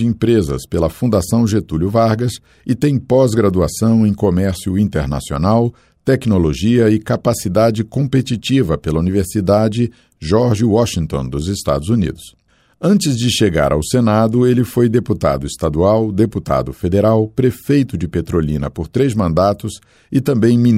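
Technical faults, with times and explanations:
No technical faults are audible anywhere in this audio.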